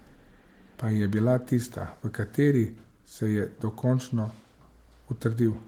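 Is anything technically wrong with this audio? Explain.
No, nothing technically wrong can be heard here.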